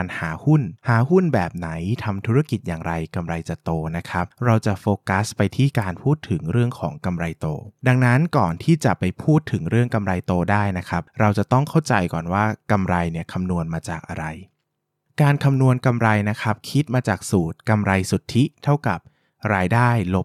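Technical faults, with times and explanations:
No technical faults heard.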